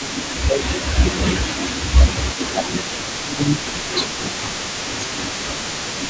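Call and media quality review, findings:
Echo leak, 0.00–6.10 s: faint delayed copy of the speech throughout, trailing by 197 ms at about 15 dB below the direct speech. Likely cause is the far end's echo canceller passing residual loudspeaker pickup back into the call. Spectrogram shows a weaker ghost of each harmonic stack offset about 0.2 s to the right, with energy ending at 8 kHz as in normal call processing. Waveform shows low-level smeared tails after syllables.

Speech suppressed in double talk, 0.06–3.68 s: speech level repeatedly pumps down while both ends are active, deepest drops roughly 15 dB, about 3 s affected in total. Likely the echo canceller misreads local speech as echo and attenuates both. Waveform shows notched envelope segments. Spectrogram shows intermittent dimming.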